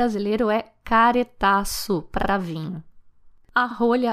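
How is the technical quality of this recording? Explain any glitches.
The recording has two brief stutters caused by repeated frames. At 2.21 to 2.29 s, a 78.4 ms stretch of speech plays twice. At 3.70 to 3.75 s, a 52.2 ms stretch repeats. The stored or transmitted compressed stream held duplicated frames, about three and two frames' worth, so the decoder replayed that audio, lengthening the clip by those amounts.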